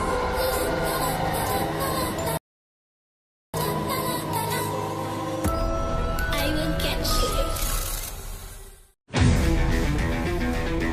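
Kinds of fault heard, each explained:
Rebuffering stall: at 2.37 s the audio drops to silence for about 1.16 s, then picks up at 3.54 s exactly where it broke off, with nothing skipped. The player had used up its downloaded audio and waited for more data before continuing.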